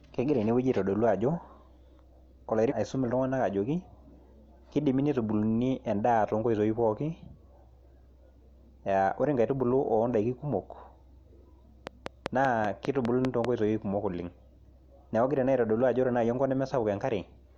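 A segment of the speech stream likely failed to load, a stream segment skipped, and playback resumed with the next one: at 2.67 to 2.73 s the speech jumps abruptly forward with a small blip, losing a stretch of the talk. Later, a likely source of interference or a faulty connection injects a train of clicks from 11.87 to 13.46 s. Around ten near-identical pops tick at a regular 5.1 per second, peaking roughly 15 dB above the speech.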